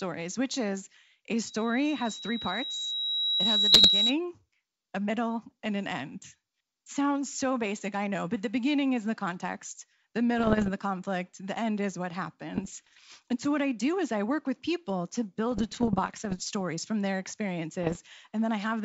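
Loudspeaker feedback squeal runs from 1.45 to 4.15 s: a pure tone near 3.9 kHz that swells over about two seconds until it sits roughly 5 dB above the speech. The microphone is picking up the loudspeaker it drives. At that one frequency the round-trip gain tops unity, so the tone keeps feeding itself and rises until it is limited or the loop is broken.

Bit errors on an ADPCM link first appear at 3.72 to 3.89 s, inside the squeal, as a rough crackling burst. They return at 10.38 to 10.71 s, just before "conflict the end is", and at 12.55 to 13.05 s, right after "the end is what". The longest burst runs from 15.52 to 16.51 s, between "work with people to" and "from their". The last comes at 17.83 to 17.97 s. These are pops and gritty patches with brief jumps in level. A flipped bit in this wideband G.722-style stream also corrupts the decoder's step size and prediction, so each error smears on for a few milliseconds instead of staying a single click. 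The densest errors, around one to two bits in a hundred, are in the shortest bursts.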